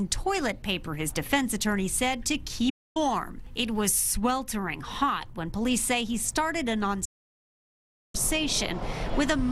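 Digital broadcast dropouts occur at 2.70 to 2.97 s and again at 7.05 to 8.15 s. Each time, the receiver stopped getting valid frames and muted, with the sound fading out over about 8 ms into silence. The first gap lasts about 0.26 s, which fits roughly eight lost frames of 32 ms. The second runs about 1.09 s, or some 34 frames. The audio picks up later in the programme, and whatever was broadcast during each gap is gone.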